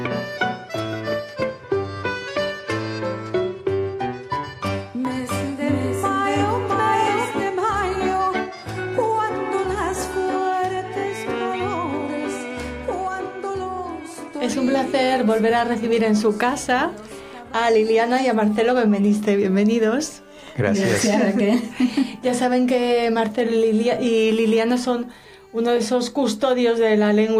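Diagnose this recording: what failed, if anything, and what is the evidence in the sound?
Doubled audio track, 5.05 to 7.31 s: an equally loud copy about 0.7 s late, starting and stopping abruptly without decay, unlike echo; likely a slower duplicate capture path.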